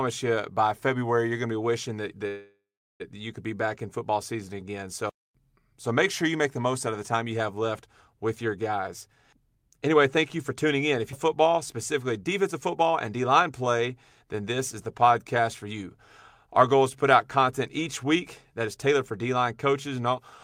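Call audio freeze, 2.27 to 3.02 s: right after "to be wishing that", the sound stops moving forward for about 0.73 s. The last sound is stretched out as a fading buzz that decays into about 0.38 s of silence, and then playback resumes with "you could be back" exactly where it left off. This likely comes from packets held up in transit that left the jitter buffer empty, so the receiver had to fill the wait. Nothing is lost, but a gap has been inserted into the speech.

Jitter buffer speed-up, 9.33 to 10.75 s: the buffer was holding more audio than its target. To shed the extra delay, the receiver cut out short pitch-period-sized pieces again and again. Roughly a tenth of a second disappears, and the speech runs at 106% speed with its pitch unchanged, so it sounds slightly rushed.

Skip ahead, 11.12 to 11.14 s: just before "football specifically", playback jumps forward. Roughly a fifth of a second of speech is dropped, and the join is bridged by only 7 ms of fill, so the audio on either side is spliced almost directly together.

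Jitter buffer speed-up again, 12.54 to 13.43 s: between "football specifically" and "play then this is" the speech runs at 106%, losing about 70 ms. A shorter speed-up follows at 18.60 to 18.94 s, running at 110% and removing about 40 ms.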